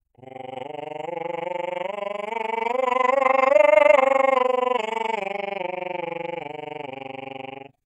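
Frames cut from the music were windowed and overlapped so that their gains never summed to a constant, causing overlap-add ripple across the whole clip. The level dips by about 60 dB around twenty times a second, producing a harsh, rough flutter throughout.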